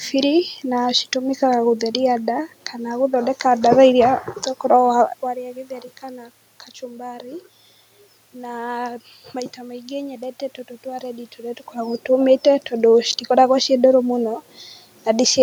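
Nothing in the system goes wrong here; the room noise underneath belongs to the recording, and the level shifts around 5 and 11.5 seconds come from the talker moving relative to the microphone.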